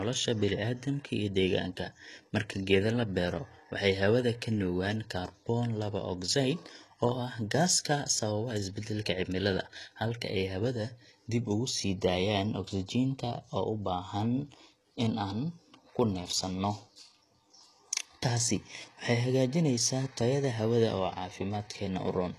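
A speech recording, with plainly audible HE-AAC compression damage throughout, likely from that codec at a rate that fits about 16 kbps. Nothing reaches above 12.3 kHz. Unlike a plain low-bitrate lowpass, the treble stays bright but is copied upward, so s sounds turn gritty and lispy.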